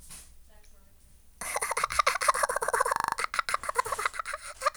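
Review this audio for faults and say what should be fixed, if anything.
From 2.96 to 3.16 s there is a system hang loop: the computer or audio driver stalled while the sound hardware kept replaying the same 40 ms stretch of its ring buffer. That piece repeats exactly five times, at a rate of 25 Hz, which sits between a buzz and a stutter and comes across as a rapid, mechanical rattle. When the audio resumes, little or nothing seems to be missing. Prevention: give the audio thread real-time priority and a watchdog that mutes output when the buffer stops being refilled.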